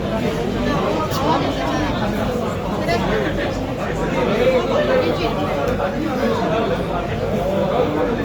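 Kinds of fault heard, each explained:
Opus compression: Throughout, the sound has a rough, grainy texture, with tonal parts turning noisy instead of staying clean. This is likely Opus in its music (CELT) mode, which keeps each band's energy but, when short of bits, fills bands by copying lower ones or with noise. The damage is plainly audible and fits a low bitrate near 24 kbps. Unlike MP3, there is little swirling or hollowness, and the bandwidth stays full, reaching about 20.1 kHz.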